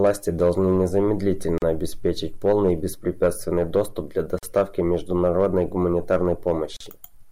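A speech clip with three short silences at joins of encoded pieces, at 1.58 s (about 40 ms), 4.39 s (43 ms) and 6.77 s (39 ms). Each piece was encoded separately and joined untrimmed, so encoder start-up delay and end padding leave these holes. Unlike a packet-loss dropout, nothing is skipped or concealed. The sound resumes exactly where it stopped. Each gap has edges the codec smears, so the silent part is shorter.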